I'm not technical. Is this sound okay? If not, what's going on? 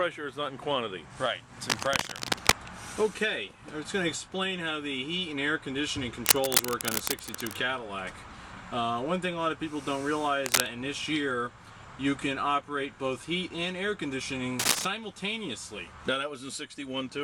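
No. A worn cable, plug or control was likely being moved, so its electrical contact kept changing. That causes cable scratch noise: bursts of scratchy rustling, louder than the sound underneath, at 1.70–2.57 s, 6.24–7.57 s, 10.46–10.66 s and 14.59–14.85 s.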